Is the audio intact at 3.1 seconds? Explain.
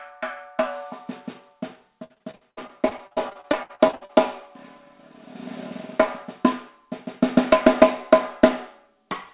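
No. From 2.04 to 4.11 s, repeated packet loss (robotic sound) punches over twenty holes, up to 64 ms each, patched by repeating prior audio. It sounds choppy, with pieces missing. A spectrogram shows smeared, frozen bands breaking up repeatedly below the 4 kHz ceiling.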